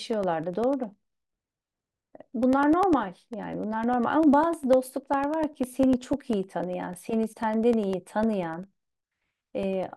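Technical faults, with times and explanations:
0.13 to 9.83 s, periodic USB or driver dropouts: about a hundred tiny gaps, one every 0.1 s, each losing roughly a millisecond of speech to silence. Something stalls the USB bus or audio driver on a fixed ten-per-second schedule, so the waveform is briefly cut and heard as a steady ticking that comes with the speech and vanishes in pauses. That strict regular spacing sets it apart from random clicks or irregular buffer underruns.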